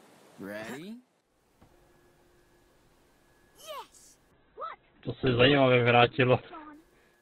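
At 4.32 s a call bitrate drop sets in and lasts until 6.79 s. The sound goes coarse and watery, and its top end collapses from a full band reaching about 20 kHz down to a 4 kHz ceiling. That loss of detail and bandwidth fits the encoder falling from around 96 kbps to roughly 8 kbps, staying at its lowest for about 2.4 s. Unlike a simple low-pass filter, it adds a gritty, smeared coding texture. Unlike packet loss, there are no gaps.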